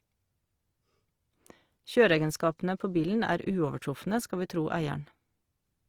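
Speech throughout, with plainly audible Opus compression: tones turn grainy and rough, content reaching about 20.4 kHz, likely a fullband CELT encode at around 24 kbps.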